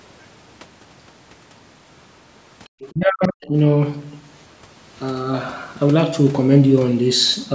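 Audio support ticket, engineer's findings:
Other side's voice leaking through, 2.64–2.92 s: faint far-end scrap, roughly 25 dB under our talker. Likely the echo canceller leaving residual loudspeaker pickup in the mic path instead of subtracting it fully.

Other side's voice leaking through again, 3.22–3.28 s: short echo blip at the same low level, sitting inside the dip below. Same likely residual-echo story.

Speech suppressed in double talk, 2.92–3.54 s: talker ducked hard, deepest cut around 40 dB, about half a second affected. Likely the canceller choking on simultaneous talk and clamping the near end too. Band tops out at 8 kHz, as expected.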